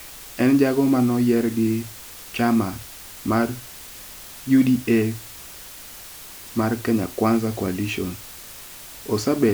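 From the first moment to the last, the speech sits under a constant, even hiss, the mark of low bit depth with dither. The audio carries only 6 bits, and random dither was added before each sample was rounded, so the rounding error becomes steady white noise, roughly 20 dB below the speech, rather than distortion. Undithered truncation would instead give gritty, signal-dependent crackle that fades with the speech; here the hiss stays level through pauses and never buzzes.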